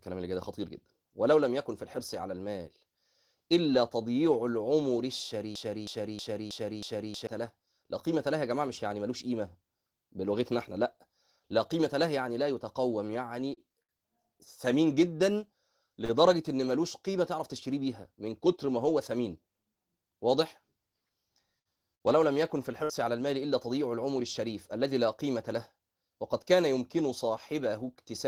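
From 5.55 s to 7.27 s the speech jams into a broken-record loop. A fragment of about 0.32 s plays five times in a row, each copy identical and butted against the next, so the same sliver of sound cycles mechanically for well over a second. Whatever speech belonged in that stretch never arrives. The likely cause is a stalled player, encoder or stream that kept re-sending the last block it still held instead of moving forward.

Between 13.10 s and 13.92 s the sound catches and drags in a series of repeated stalls (stutter). It hesitates four times, and the longest hold lasts about 64 ms. Together the holds fill 117 ms, roughly a seventh of that span. Packets were reaching the receiver more slowly than they were being played, so its jitter buffer kept emptying. Each time, it sustained the last sound until fresh audio came in. The speech loses its pace, but none of it goes missing.

At 16.05 s a single sound is held a touch too long. 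This is a short stall from a late packet. One packet missed its slot, the buffer ran dry, and the receiver extended the preceding sound by 44 ms. When the packet arrived, playback resumed exactly where it had stopped, so nothing was lost. The only trace is that brief sustain and the 44 ms of extra delay it added.

From 21.59 s to 22.92 s the speech turns choppy, the robotic sound of repeated packet loss. Three separate holes open within that stretch, the longest about 58 ms. Each is papered over by prolonging the last sound. Those patches total 163 ms. This time, though, 180 ms of real audio is gone for good, so parts of the speech are simply absent rather than delayed.

At 25.48 s to 25.84 s the speech suddenly sounds hurried. It runs at about 110 % speed while the pitch stays unchanged, which is the signature of a jitter buffer speed-up. The buffer had built up more audio than its target. 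To shrink that delay, the receiver cut out tiny pitch-period-sized slices many times in quick succession, discarding around 50 ms in total and briefly compressing the rhythm of the speech.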